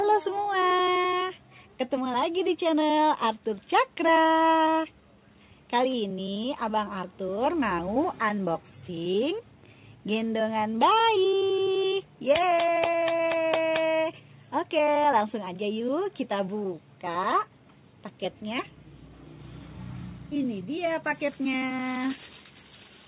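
There are no technical faults to describe in time order; the sound simply carries the narrow call bandwidth of a G.711 A-law path, with nothing above 4 kHz.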